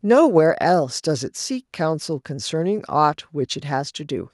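A short speech recording, with no technical fault audible at any point. Nothing in the audio chain stands out as needing attention.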